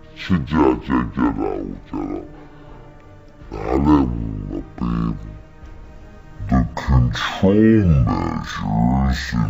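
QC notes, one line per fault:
Throughout: stereo read as mono. The player took an interleaved two-channel stream and read left and right samples one after another as a single channel, so each stereo frame became two consecutive mono samples. Everything plays at 0.5x speed and drops 12 semitones, a full octave, giving a slow, heavy, sagging character. The alternating left/right samples also fold a fainter mirror image of the sound into the upper half of the spectrum, heard as a thin, ghostly overlay.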